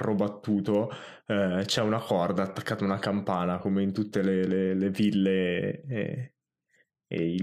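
No technical faults are audible.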